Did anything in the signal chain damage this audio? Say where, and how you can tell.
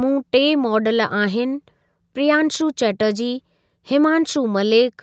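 No, nothing damaged it.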